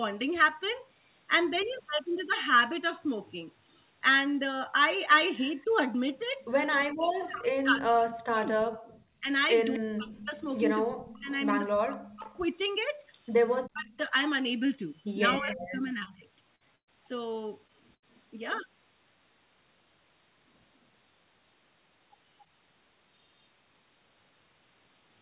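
Right at 5.6 s an echo leak starts and runs to about 7.23 s. A very faint copy of the speech comes back about 0.25 s late. The likely cause is a far end on a loudspeaker whose echo canceller didn't scrub everything its mic picked up, so the leftover got sent back down the line.

Starting at 5.64 s and lasting until about 16.24 s, you get speech suppressed in double talk. The talker's level keeps dropping away, in places very deeply. That adds up to roughly five seconds of dipped or chopped speech over that stretch. What's likely happening is that the echo canceller couldn't tell the local talker apart from the loudspeaker echo while both were active, so it clamped down on everything together.

A second echo leak runs from 8.97 s to 15.56 s. This time the delay is about 0.32 s and the returned copy is noticeably louder than the first one, a doubled, late version of the speech sitting under the live signal. 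Again, the likely culprit is the loudspeaker end's canceller letting residue through.

Then the network trouble begins. There's short concealed packet loss at 16.04–16.08 s and again at 17.67–17.71 s, each covering about 20 ms of missing audio. The receiver papered over each hole by extending the last bit of sound and blending back in, so you hear a tiny smear or wobble rather than a gap.

Bursts of packet loss hit at 16.56–16.63 s (about 40 ms gone), 16.76–16.89 s (about 120 ms gone) and 17.95–18.04 s (about 80 ms gone). In each one the concealment holds the previous sound and fades it. That gives a brief buzz or hiss, and in the 16.76 s burst it sinks to near silence for most of the gap. The speech then picks up further along, with that slice simply missing.

Throughout, the band stops at 4 kHz, which is what the narrowband call codec does.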